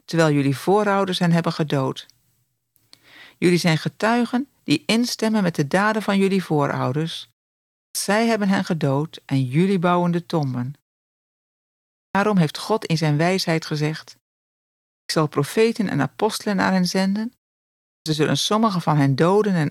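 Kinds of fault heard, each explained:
Clipped start after a pause: the output wakes late after each silence, cutting about 0.1 s from four speech onsets; waveforms start abruptly at full level, spectrograms show sharp vertical edges.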